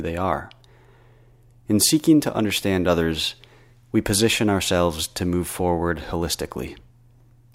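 Nothing stood out on listening to the speech in this recording.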